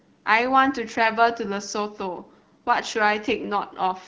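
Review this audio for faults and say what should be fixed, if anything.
Nothing here needs fixing: the speech comes through an AMR wideband (HD Voice) path whose clarity fits the 12.65 kbit/s mode, and no faults are present.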